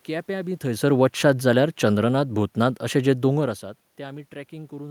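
From 0.71 s to 3.57 s the speech sinks steadily by about 4 dB, and the room noise behind it sinks by the same amount, so the whole background drops with the speech. That shared drop marks it as automatic gain falling: the gain control judged the input too loud or its background noise too strong, and eased its gain down over nearly three seconds. The level shifts near half a second and around three and a half seconds come from the talker moving relative to the microphone.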